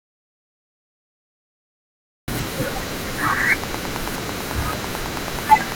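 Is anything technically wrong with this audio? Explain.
Yes, there are two faults in this speech clip.

From the very start until 2.28 s there is an audio dropout to silence: dead silence with no room tone, then the speech cuts in. The likely cause is lost input, such as a disconnected device or an accidental mute, while recording continued.

From 3.31 to 5.73 s a train of clicks, about 20 sharp, evenly spaced ticks at roughly 9 per second, rides around 15 dB above the speech. These most likely come from electrical interference or a faulty connection or power supply.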